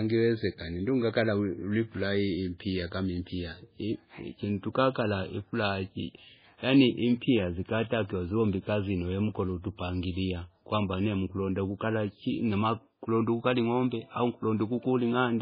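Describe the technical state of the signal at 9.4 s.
At 9.4 s the speech carries heavy MP3 compression artefacts, present throughout the clip. Nothing is heard above 5 kHz. Weak spectral lines drop in and out, giving a watery, swirly texture with smeared onsets. The likely cause is an MP3 encode at about 16 kbps.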